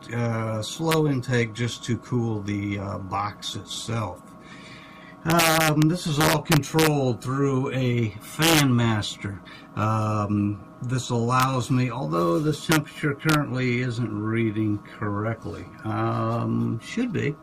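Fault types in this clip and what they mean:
Integer overflow: whenever the signal pushes past the top of the integer range, it wraps straight round to the opposite extreme instead of being held at the limit, so each overshoot becomes a full-scale jump. Here that gives harsh, splintering cracks on the loud peaks, far nastier than ordinary clipping, at 0.91, 5.3 to 5.8, 6.2 to 6.9, 8.4 to 8.6, 11.4, 12.7 and 13.3 s, with the peaks overshooting by about 1 to 4 dB.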